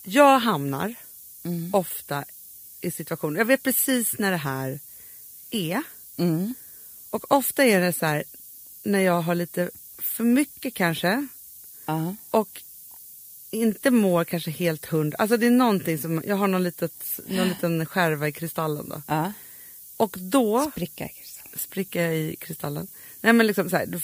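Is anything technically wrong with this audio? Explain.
Yes. Low bit depth with noise shaping runs throughout: the speech is quantised to about 8 bits, and the rounding error is pushed upward, leaving a steady, thin hiss roughly 15 dB below the speech that climbs strongly toward the top of the band.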